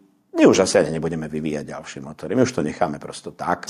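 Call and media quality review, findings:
Gain pumping, throughout the clip. Level swing about 10 dB. Dynamics flattened, loud and soft parts too close. Likely cause: input gain set far too high, with a fast limiter or compressor clamping every peak and releasing quickly afterwards.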